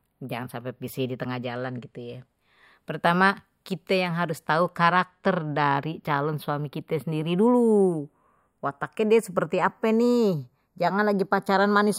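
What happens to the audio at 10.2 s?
At 10.2 s the channels are drifting apart, as throughout the clip. A small clock mismatch lets the delay creep toward a fraction of a millisecond. Summed to mono, sweeping notches sound like slow flanging.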